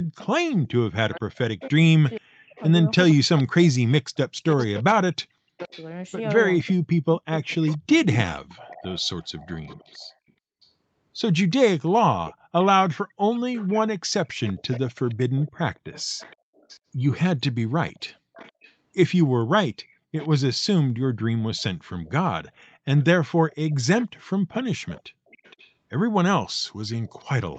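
Speech, with an echo leak through most of the clip: 0.18 to 5.86 s, 7.53 to 10.31 s, and 12.25 s to the end. A delayed copy of the speech trails it by 468 ms, sitting about 20 dB below in the first stretch and about 25 dB below later. This is likely a far-end loudspeaker whose echo canceller let part of the sound back into its microphone. From 0.61 to 8.25 s there is speech suppressed in double talk. The talker's level dips in pieces, at worst by about 40 dB, for around four seconds in all. The likely cause is the canceller mistaking overlapping talk for echo and turning everything down. Through the call path, the sound stops at 8 kHz.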